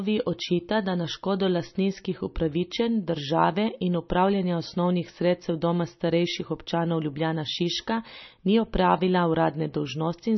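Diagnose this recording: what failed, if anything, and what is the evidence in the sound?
Codec stage: the speech has nothing above 5.9 kHz and heavy watery swirl throughout, likely MP3 compression at a very low bitrate, around 26 kbps. The swirl distinguishes it from a plain low-pass filter.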